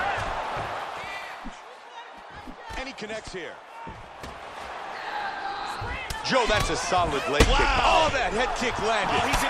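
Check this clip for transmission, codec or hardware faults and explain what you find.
Zipper noise runs from 0.76 to 1.68 s. The level drops by roughly 10 dB in unsmoothed 2 dB jumps, about seven a second. Each jump leaves a tiny click, so you hear a ticking zip riding on the sound as it fades.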